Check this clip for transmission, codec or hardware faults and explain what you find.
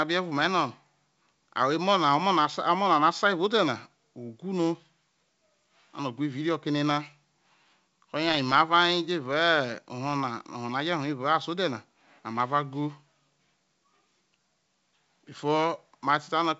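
No faults detected in this clip.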